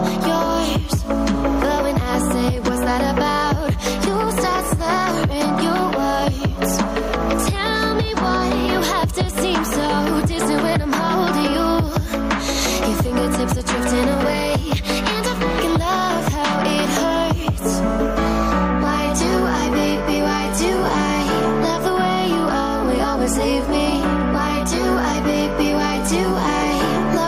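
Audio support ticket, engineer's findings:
Gain pumping, whole clip. Overall level breathes by around 5 dB. Dynamics squashed, loud and soft parts pulled close together. Component: input stage, likely preamp gain set far too high for the mic, with a fast limiter/compressor clamping each peak and releasing in pauses.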